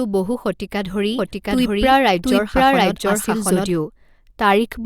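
From 1.18 s to 3.72 s the speech is heard twice: a second, equally loud copy trails the original by about 0.7 s, cutting in and out abruptly with no reverberant tail or room colouring. This is a doubled audio track. The same signal is mixed against itself at a fixed offset, likely because a slower capture path recorded it again or an edit left two misaligned copies overlapping.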